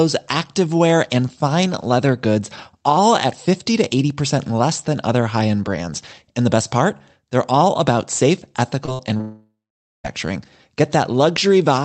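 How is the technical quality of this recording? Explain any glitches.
The recording has a cluster of call-network glitches packed into roughly one second near the end, ending in a clear gap. The sound passed through a call codec, with the audio band stopping around 8 kHz, consistent with Opus at a modest bitrate.

Short concealed packet loss, 8.85–8.89 s and 9.17–9.21 s: each is a tiny smear or wobble where about 20 ms of audio failed to arrive in time. The receiver papered over each hole by extending the preceding sound, following its pitch if voiced or as shaped noise if not, then crossfading back into the real signal, so a brief sound there can simply go missing.

Burst of packet loss, 8.93–9.01 s: here the smear stretches into a short held buzz or fading hiss, because about 60 ms went missing in one run. With several consecutive packets gone, the receiver kept synthesising a continuation of the last sound while lowering its level. 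When real audio resumes it picks up later in time, and the portion that fell inside the gap is simply gone.

Long network dropout, 9.21–10.06 s: the sound trails off into a fading buzz or hiss and then goes quiet for about half a second before resuming. Roughly 840 ms never played, likely because the network stopped delivering audio for that whole stretch. Concealment can only extend the last sound for a short while, so it faded to silence, and the content from that span is lost.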